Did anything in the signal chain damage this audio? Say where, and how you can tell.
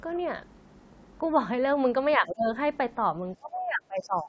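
Yes. The speech drops by roughly 20 dB from 2.17 to 2.47 s and from 3.36 s to the end. This is speech suppressed in double talk, likely the call's echo canceller ducking both sides at once.

A faint second voice, the other side's voice leaking through, appears from 4.01 to 4.09 s at about 25 dB below the speech. The likely cause is loudspeaker echo that the canceller left in the microphone signal.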